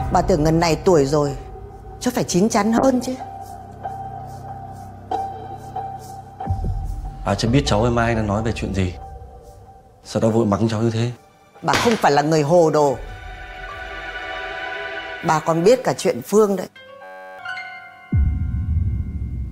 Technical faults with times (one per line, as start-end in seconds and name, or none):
2.79-6.75 call bitrate drop
17.03-17.39 system hang loop